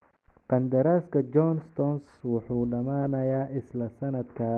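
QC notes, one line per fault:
3.01–3.07 s, lost packet rebuilt from error correction: about 40 ms came from the low-bitrate backup copy the decoder substituted, so there is no gap but the sound turns briefly rougher and noisier.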